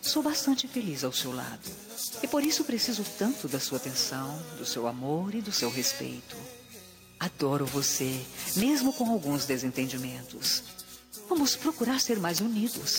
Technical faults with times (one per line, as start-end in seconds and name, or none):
0.00-12.98 gain pumping